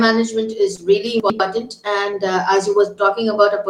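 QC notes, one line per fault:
0.75–0.79 s and 2.11–2.14 s, short concealed packet loss: about 20 ms each failed to arrive, so the decoder extended the preceding sound and crossfaded back, leaving brief smears.
1.20–1.40 s, chunks out of order: a 100 ms chunk plays one slot late, after its successor, so the sound jumbles briefly across three hard joins.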